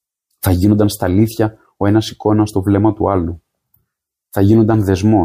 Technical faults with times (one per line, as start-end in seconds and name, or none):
none